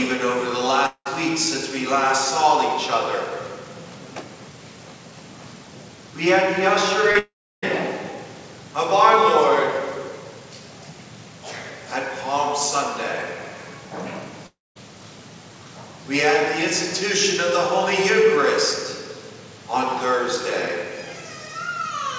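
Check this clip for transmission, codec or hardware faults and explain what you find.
There are transmission faults here: three long gaps and one short patched-over loss, all on top of a call-codec path that stops dead at 8 kHz, which fits G.722 at around 64 kbps.

Long network dropouts at 0.86–1.07 s, 7.19–7.64 s and 14.46–14.77 s: the sound trails off into a fading buzz, then sits silent for roughly 70 ms, 320 ms and 220 ms, and comes back with that stretch simply missing. That's likely packets not arriving for a while, with the receiver extending the last sound until it gave up.

Short concealed packet loss at 7.11–7.17 s: about 40 ms never reached the decoder in time, so the receiver stretched the preceding sound to bridge it and blended back in. You hear a brief smear just before the second long dropout starts.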